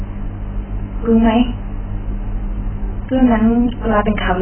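Speech runs through the whole clip with heavy AAC compression damage. Nothing is present above about 3.1 kHz, so the sound is dull, and sibilants turn fizzy and smeared. A spectrogram would show a hard ceiling at 3.1 kHz, with patchy holes and blotchy noise-filled bands below it. The likely cause is AAC-LC encoding at a very low bitrate, around 9 kbps. At that rate the encoder trims the bandwidth and starves the remaining frequency lines of bits.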